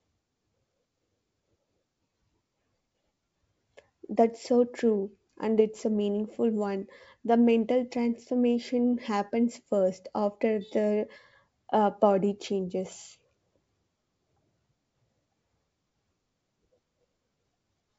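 No faults in this speech clip; the call path's band limit at 8 kHz fits a wideband codec such as G.722.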